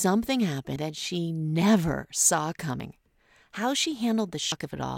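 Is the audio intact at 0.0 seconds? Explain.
Yes, the speech is intact at 0.0 seconds, with no audible fault at that moment.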